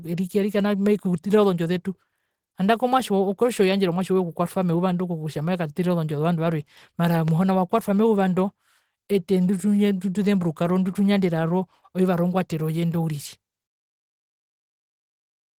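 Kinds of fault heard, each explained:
Opus compression: The speech is plainly damaged throughout in the hoarse, rough way of Opus running its hybrid speech mode, which points to a low rate of around 16 kbps. The bandwidth stays fullband, reaching up to about 20.3 kHz.
Loud pop: A single sharp pop lands between 7.28 and 7.30 s, after "ozondjo zovandu varwe mara" and before "wakwatwa meyuva ndo ete", peaking roughly 10 dB above the speech. It is likely a brief voltage pulse in the chain, and the speech continues underneath.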